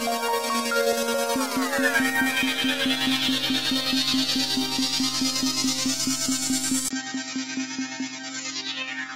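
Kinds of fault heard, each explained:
Input switched to a poorer device: from 6.89 s, after a 20 ms gap, the sound turns dull with nothing above 7.3 kHz, likely because recording moved to a narrower-band input.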